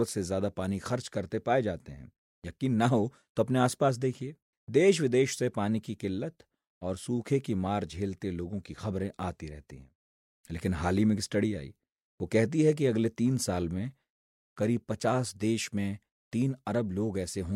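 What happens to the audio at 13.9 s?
Nothing goes wrong at 13.9 s: the speech runs on intact through that moment, with no dropout, click or other fault.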